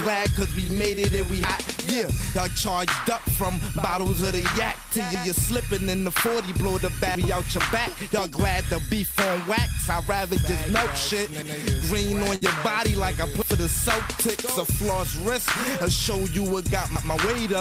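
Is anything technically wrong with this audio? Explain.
Yes, there's a burst of packet loss at about 12.35 to 12.43 s. A run of packets never made it in time, so the receiver stretched the last sound out and faded it, a held buzz or fading hiss, then jumps ahead, dropping about 60 ms.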